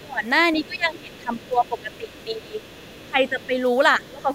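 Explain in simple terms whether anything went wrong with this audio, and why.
Two related problems show up, both pointing to an echo canceller struggling while both ends of a call talk at once.

Speech suppressed in double talk: the main talker's speech gets pushed down at 0.0 to 0.25 s, 0.61 to 2.63 s, 3.06 to 3.54 s and 3.98 to 4.3 s. The first dip is the deepest, nearly cutting the sound out; the later ones are milder. The likely cause is the canceller failing to separate the local talker from the loudspeaker's sound, so it turned down both.

Other side's voice leaking through: faint traces of a second voice sit underneath at 0.73 to 2.33 s and 2.51 to 3.07 s, with short scraps at 3.4 and 4.01 to 4.11 s. This is quiet, well below the main speech, but present. It is likely the far end's audio playing from the loudspeaker and reaching the microphone, where the canceller did not remove all of it.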